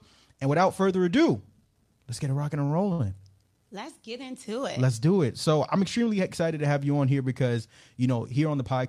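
Speech audio with two network-timing faults. Between 2.17 and 3.01 s there are repeated stalls (stutter): packets arrived late, so the jitter buffer emptied four times, and the receiver stretched the last sound across each gap, filling 117 ms in total, with the longest hold 65 ms. Nothing is lost, but about a seventh of that stretch is held-over sound, so it drags and hiccups. From 8.38 to 8.86 s there is a jitter buffer speed-up: the buffer held too much audio, and the receiver cut out short pitch-period slices, some 50 ms in all. The speech runs at 109% of normal speed with unchanged pitch and sounds hurried.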